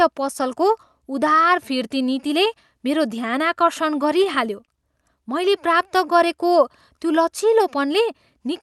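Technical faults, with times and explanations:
4.03–4.70 s, scattered short gaps: just after "मेरो ध्यानाकर्षण", about four tiny holes appear, none longer than roughly 20 ms and together only around 40 ms, a small fraction of the stretch. Packets arrived late or not at all, and the receiver papered over each hole by extending the sound that came just before it. The result is a few brief ticks and smeared moments while the speech itself stays clear.
5.89–6.50 s, jitter buffer slow-down: here the speech drags slightly, running at about 94% of normal speed with no change in pitch, stretching this span by 46 ms. The receive buffer was short of reserve, so it repeated single pitch cycles and slivers of pause to buy time. That repetition draws sounds out, on top of the band-limited coding of the call path.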